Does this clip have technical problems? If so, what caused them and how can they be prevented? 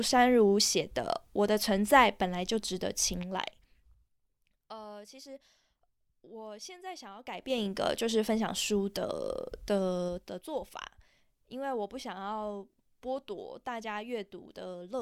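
Yes. Zipper noise occurs during three level moves in the speech: from 3.16 to 4.18 s as the level falls by about 20 dB at around seven steps per second, from 7.15 to 7.71 s as it rises by about 20 dB at around fifteen per second, and from 10.03 to 10.50 s as it falls by about 15 dB at around ten per second. Each move is made in 3 dB jumps with no interpolation, so every jump leaves a small click, and the clicks together form a ticking or zipping texture. Interpolating gain per sample, or applying a short ramp across each step, removes these clicks.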